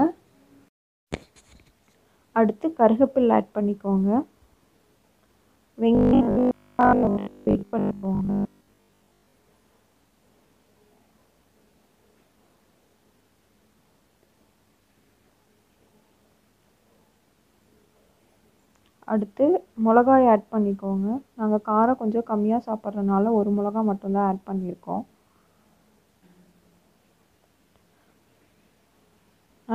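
From 5.95 to 9.35 s the sound turns rigid and metallic, a steady buzz pitched at 50 Hz that still loosely tracks the shape of the audio underneath. This is robotic sound from repeated short buffers. The likely cause is new audio arriving too seldom, so the playback fills the gaps by looping the last chunk, here about 20 ms long to match the 50 Hz buzz. Most of that stretch is repeated material rather than fresh audio, which is what imposes the fixed pitch.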